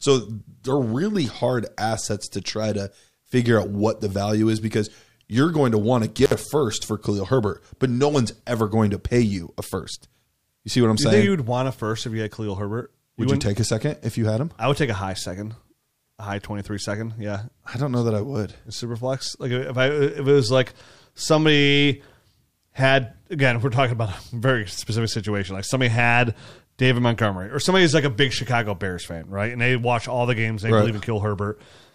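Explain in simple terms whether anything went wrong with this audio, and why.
At about 6.24 to 6.34 s, right after "going to want to" and before "a first for", the speech briefly drops out with a crackle at each edge. This is an intermittent contact: a loose cable or plug lost its connection for roughly 58 ms, leaving only faint hiss.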